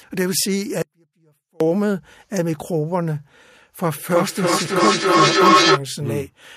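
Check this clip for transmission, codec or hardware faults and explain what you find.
Two faults are present.

From 0.82 to 1.60 s, an audio dropout to a faint residue: the speech cuts abruptly to a trace about 35 dB down, likely signal loss on a live path; the waveform shows a near-flat gap.

From 4.04 to 5.84 s, feedback echo between two devices: speech recirculates roughly every 0.3 s and builds to about 7 dB above the speech, showing as stacked, regularly spaced repeats on the spectrogram.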